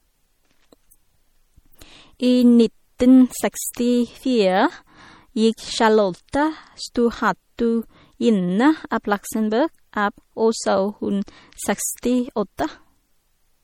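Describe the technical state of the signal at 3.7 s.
At 3.73 s there's a pre-echo: a short hiss of about 13 ms slipping in just ahead of a sharp attack in the speech. The codec spreads quantisation noise across its whole transform block, so when the onset lands late in that block, noise sized for the loud part leaks into the quiet gap before it. You hear a little smear of noise and the attack loses some of its crispness.

Underneath that moment, and across the whole clip, the speech has plainly audible coding damage: a watery, swirly texture where weak frequency components drop in and out from frame to frame, with sibilants turning metallic. That points to MP3 compression as the likely cause, and the heaviness of the artefacts fits a low bitrate of around 48 kbps. The same coarse block coding is what produces the pre-echo at 3.73 s.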